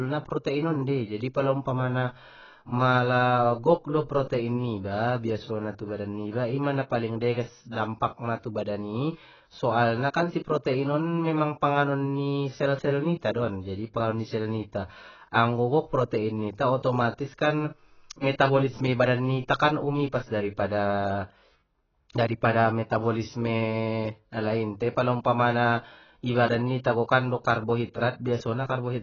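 Speech clip with AAC compression damage throughout. Nothing is heard above 6.8 kHz. The sound is dull and smeared. Sibilants fizz and warble. The encoder is starved of bits and discards detail. The heavy damage fits a cause of likely AAC-LC near 12 kbps.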